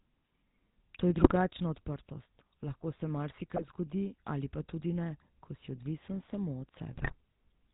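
From the start the whole clip carries the GSM full-rate codec sound. The speech has that buzzy, gravelly edge you get when a vocal-tract model is driven by a sparse, regularly spaced pulse train. It also has a hard ceiling at 4 kHz, so there's no air or sibilant sparkle on top. The damage is plainly audible, and the roughness sounds like what you'd expect from a 13 kbps GSM link.

On top of that there are three bursts of GSM bit errors, from 1.18 to 1.33 s, 3.56 to 3.64 s, and 6.92 to 7.13 s. In each one, corrupted bits seem to have reached the decoder and scrambled the filter, pitch and gain parameters for a few frames. The speech briefly turns into squawking, gargly pops and level jumps. The last burst is the longest and the nastiest of the three.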